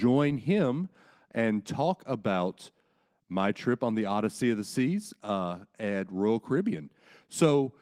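The speech recording contains no audible technical faults.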